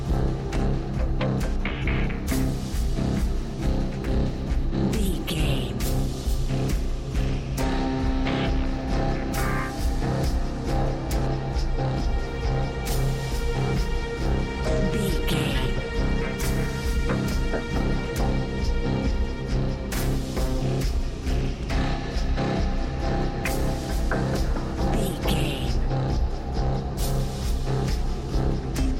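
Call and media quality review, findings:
No dropouts, level jumps, distortion or timing discontinuities are audible anywhere in the signal.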